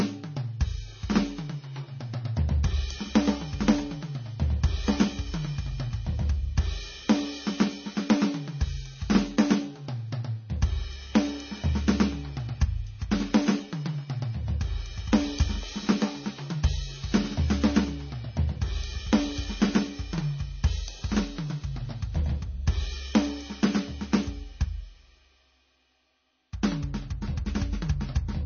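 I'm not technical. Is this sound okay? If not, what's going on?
No. MP3 compression throughout the music: it likely went through a very squeezed MP3, which removed everything above 6.6 kHz and left a dull, watery, swirly sound.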